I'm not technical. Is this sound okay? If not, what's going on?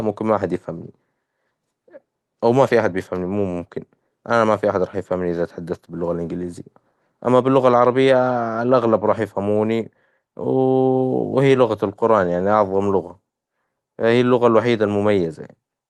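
Yes, nothing stood out as a problem when listening to this speech recording, which sounds like it came over an ordinary internet call.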